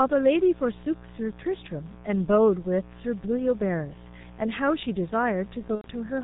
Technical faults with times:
0.00-6.24 mains buzz
0.00-6.24 G.723.1 codec
5.75-5.90 VoIP packet loss concealed by the speech codec

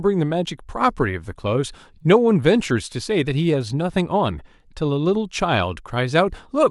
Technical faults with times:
0.00-6.70 resampler restarted on every block

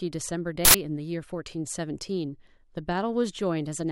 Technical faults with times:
0.65-0.74 uninitialised buffer

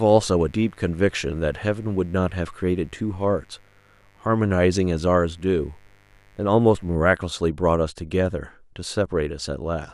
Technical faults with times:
0.00-6.96 mains buzz

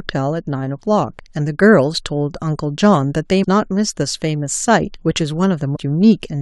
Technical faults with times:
3.43-3.45 compressed frames skipped
5.75-5.77 compressed frames skipped

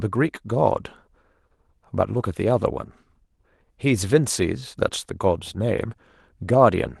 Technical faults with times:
2.13-2.27 lost packet rebuilt from error correction

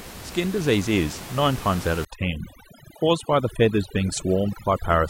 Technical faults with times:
2.05-5.09 overdone noise removal

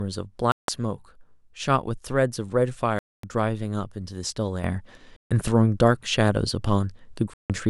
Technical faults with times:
0.52-0.69 Bluetooth dropout
2.99-3.24 Bluetooth dropout
4.64-7.70 sudden gain jump
5.16-5.31 Bluetooth dropout
7.33-7.50 Bluetooth dropout

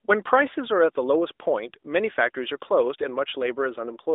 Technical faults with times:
none

